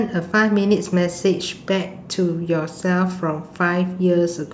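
Speech recording with no technical faults heard.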